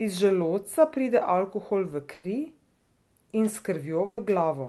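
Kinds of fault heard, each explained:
Burst of packet loss: At 2.13 s and 4.05 s, about 100 and 120 ms of speech go missing. A fading continuation of the preceding sound fills each gap.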